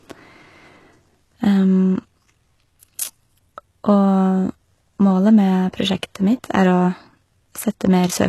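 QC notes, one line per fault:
Throughout, HE-AAC compression: the treble sounds synthetic, with s sounds coming out gritty and lispy, and nothing at all above about 12.3 kHz. The damage is plainly audible. The likely cause is a low-rate HE-AAC encode, which fits a bitrate around 16 kbps. Only the lower band was truly coded, and the top was rebuilt by copying lower bands upward under a coarse envelope, so the recreated harmonics don't match the originals.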